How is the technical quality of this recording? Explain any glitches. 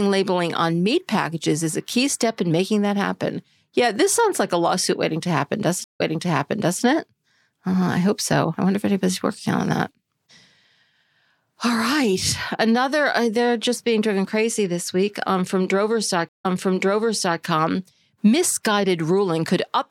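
The speech is interrupted twice by a stream reconnect, at 5.84 to 6.83 s and at 16.29 to 17.41 s. Each time the connection dropped and the player restarted its decoder. There is a silence of about 150 ms. The speech then resumes from an earlier point, roughly 0.84 s back the first time and 0.97 s back the second. This happens because the server resent a burst of audio. A short stretch of speech is heard twice.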